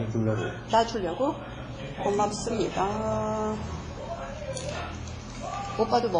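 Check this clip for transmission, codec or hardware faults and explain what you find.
One codec fault runs through the whole clip: likely WMA compression, heavy enough to suggest a bitrate around 24 kbps. Everything above 10.5 kHz is cut away, leaving ringing, washy sound with hiss that swells and fades with the signal. On a spectrogram this appears as a hard ceiling at 10.5 kHz and blotchy, smeared patches where weaker components have vanished.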